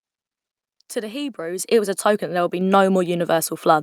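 The microphone volume stepped up twice in this speech clip: the call software judged the input too quiet and raised the device's gain in single jumps. At 1.59 s, just before "it was a token", the level leaps by about 9 dB, and at 2.61 s, right after "that there would be", by about 4 dB more. Because the gain is applied at the input, voice and background noise rise together, abruptly, mid-speech.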